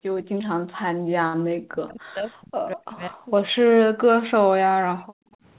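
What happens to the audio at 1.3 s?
A burst of packet loss hits from 1.28 to 1.36 s: several packets arrived too late or never arrived, so the receiver stretched the last sound for about 60 ms while fading it down, then resumed with roughly 60 ms of speech skipped.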